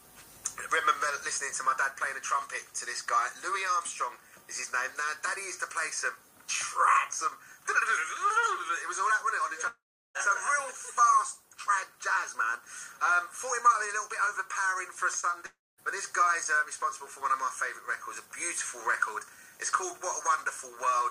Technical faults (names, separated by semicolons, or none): long network dropout; short concealed packet loss